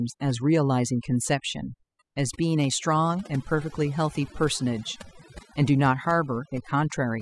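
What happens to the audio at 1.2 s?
At 1.2 s you're hearing overdone noise removal, and it runs through the whole recording. The denoiser was pushed too hard, so it kills any frequency band sitting near its noise estimate, quiet speech detail included. The background drops and breaks up into little twinkling specks.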